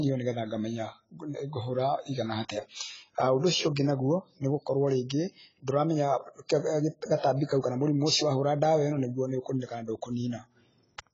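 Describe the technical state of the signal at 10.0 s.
At 10.0 s the speech is dull and smeared, with nothing above 7.6 kHz and a warbly, fizzy texture on sibilants that runs through the whole clip. This is likely AAC compression, heavy damage consistent with a low bitrate around 16 kbps. The codec cuts the top band and starves the remaining frequency lines. A plain low-pass filter would only darken the sound, without the swirling artefacts.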